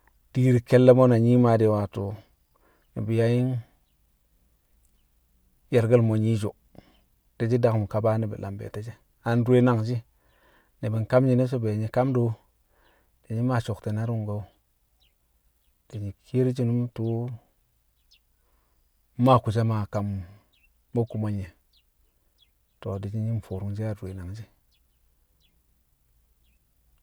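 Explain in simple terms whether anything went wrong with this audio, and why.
Nothing went wrong with this speech recording, as no technical faults can be heard anywhere in it.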